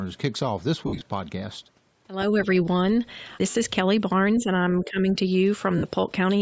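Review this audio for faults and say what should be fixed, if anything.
Bluetooth LC3 compression runs through the whole clip. The speech has a grainy, breathy edge with a noise-filled top end. This likely comes from an LC3 link at about 32 kbps with 10 ms frames. To prevent it, raise the LC3 bitrate or choose a higher-quality LE Audio configuration.

Lost LE Audio frames occur at 0.87 to 1.01 s, 3.50 to 3.55 s and 5.78 to 5.84 s. The decoder repeats the last spectrum with scrambled phase, so the sound smears into noise and briefly fades. The first event covers 110 ms of gaps spread over 140 ms, with the longest run around 70 ms. The other two each cover 50 ms. To prevent it, improve the radio link by reducing distance and interference, or add retransmission headroom.

Speech suppressed in double talk dips the level by about 5 dB at 4.39 to 4.55 s and by about 10 dB at 4.82 to 5.07 s. The likely cause is an echo canceller that could not separate near-end speech from the loudspeaker echo while both sides talked, and turned both down. 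To prevent it, tune the echo canceller's double-talk detection so that near-end speech is kept while both sides talk.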